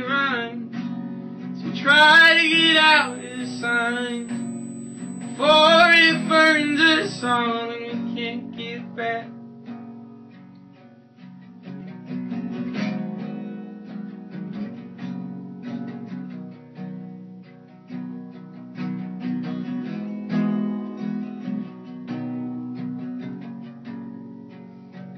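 From 1.89 to 7.37 s the audio carries USB whine, a fixed 8 kHz tone about 25 dB below the signal, leaking in from 125-microsecond microframe current draw. Mains hum would sit far lower, at 50 or 60 Hz.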